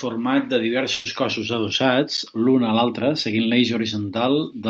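From 0.93 to 1.07 s, a burst of packet loss drops 120 ms. Concealment stretches the last sound into a fading hold rather than a dropout's silence.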